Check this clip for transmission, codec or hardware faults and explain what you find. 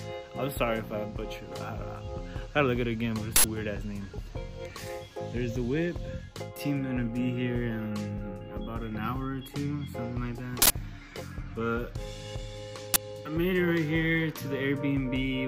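Three uninitialised buffer faults occur, at 3.36 to 3.44 s, 10.62 to 10.70 s and 12.94 to 12.96 s. Each block was played before audio was written into it. Leftover memory values became samples. The result is a loud crack or burst of digital noise, 80, 80 and 20 ms long.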